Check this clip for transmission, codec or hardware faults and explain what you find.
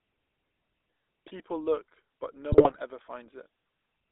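Two faults are present: GSM full-rate codec coloration over the whole speech clip, and a burst of GSM bit errors just past the midpoint.

The GSM full-rate codec shapes the whole recording. The speech is confined to a telephone band of roughly 300 Hz to 3.7 kHz, so it sounds thin with no air on top. The codec rebuilds each frame from a vocal-tract filter driven by a coarse, regularly spaced pulse excitation, which fits the 13 kbps full-rate coder. That decimated excitation is what makes the voice plainly buzzy and gravelly from start to finish.

GSM bit errors break the audio from 2.52 to 2.80 s. Corrupted bits reached the decoder, so the filter, pitch and gain parameters it used for those frames were wrong. The spectrum bends unpredictably and the level jumps frame by frame, producing squawks, pops and a gargling texture for just under a third of a second. The density of the damage points to a bit error rate of a few percent across about 14 consecutive frames.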